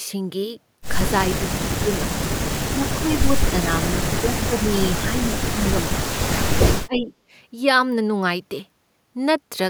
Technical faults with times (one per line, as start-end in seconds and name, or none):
1.38-2.03 speech suppressed in double talk
2.70-6.29 speech suppressed in double talk
6.85-7.12 speech suppressed in double talk
6.95-7.00 echo leak